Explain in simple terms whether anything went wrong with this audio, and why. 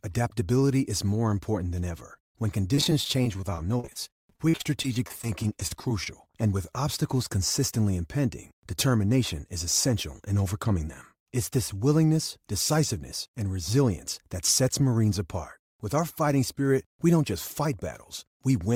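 Between 2.74 and 6.07 seconds the speech turns choppy and robotic. This is repeated packet loss (robotic sound). Pieces of the audio kept failing to arrive in time, dozens of short holes, none longer than 43 ms. Each hole was covered by stretching the sound just before it, and about a sixth of that stretch is filled this way. The rapid run of gaps gives a choppy stutter, unlike a single dropout, which leaves just one brief silence or blip.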